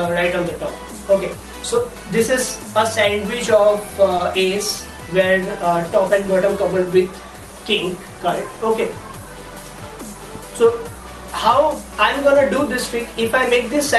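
At 4.17 to 4.21 s the sound briefly hangs: a fragment is held a touch too long, with a faint buzz or dip before it carries on from exactly where it left off. This is a short stall from a late packet. A packet arrived after it was due, the jitter buffer ran dry, and the receiver stretched the last audio by about 20 ms to cover the gap. Nothing is lost, but playback now runs 20 ms later. The Opus call path keeps the audio within a 12 kHz upper limit throughout.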